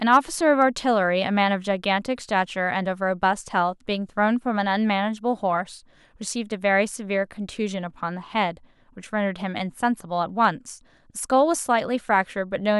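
Hard clipping appears from 0.12 to 0.17 s, then at 0.61 s and 10.44 s. The speech peaks exceed what the stage can pass, by about 2 dB and then about 1 dB, so their tops are cut flat and brief crackles sound.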